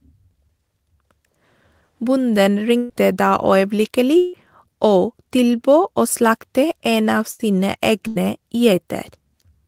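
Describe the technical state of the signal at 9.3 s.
At 9.3 s the speech signal is intact, with no dropout, distortion, glitch or other technical fault at that moment.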